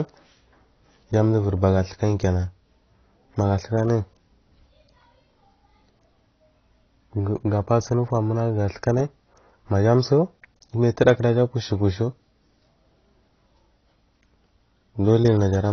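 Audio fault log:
Throughout, AAC compression: the speech is dull, with nothing above about 6.6 kHz, and sibilants and sustained vowels carry a fizzy, warbling smear. This is likely low-bitrate AAC-LC, which fits roughly 24 kbps, lowering its cut-off and coarsely quantising the remaining bands.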